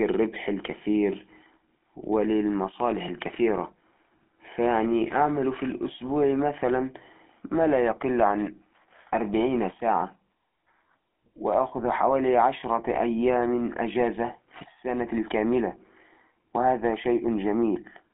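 Throughout the speech there is GSM full-rate codec damage, a plainly buzzy, gravelly roughness from coarse pulse-driven excitation that fits 13 kbps coding. A spectrogram shows a telephone band of 250 Hz to 3.4 kHz, with nothing above 3.7 kHz.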